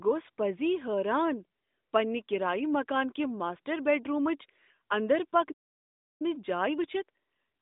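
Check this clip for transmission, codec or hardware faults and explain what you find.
Two playback faults appear near the end of this speech clip, carried over a narrowband mobile link whose audio sits between roughly 200 Hz and 3.7 kHz with nothing above 3.8 kHz.

Playback stall, 5.51 to 6.22 s: right after "کہ ماسٹر بیڈرومٕچ اندر" the output drops to silence for about 0.68 s, cutting the speech off mid-flow. The likely cause is that the player's buffer ran dry or its playback thread was blocked, so it had no audio to send until it recovered.

Time-compressed catch-up, 6.22 s to the end: once playback resumes, the player clears the backlog that built up during the stall by cutting out small pieces and cross-fading the remaining audio. The speech runs about 1.15 times faster than normal but keeps its pitch, so it sounds hurried rather than higher.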